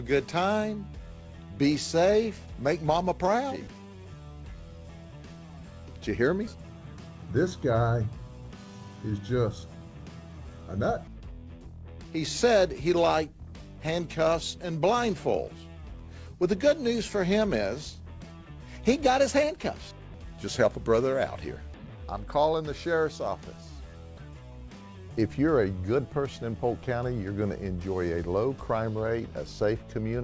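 No technical faults are audible.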